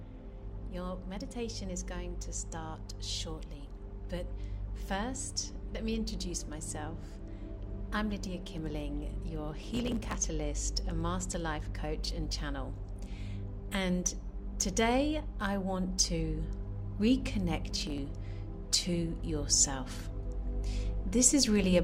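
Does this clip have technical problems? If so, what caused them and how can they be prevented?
Yes. Processor overload crackle appears from 9.63 to 10.16 s and again from 17.69 to 17.98 s. In both bursts the processor falls behind and keeps missing the deadlines for its tiny audio buffers, each well under a millisecond long. Roughly 70 and 20 of them are skipped in quick succession, and every skip leaves a hard-edged gap. Together the gaps form a gritty tearing over the sound that stops once the load drops. To prevent it, raise the buffer size and reduce the processing load or background tasks while recording.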